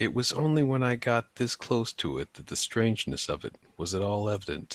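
No technical faults can be heard in this speech.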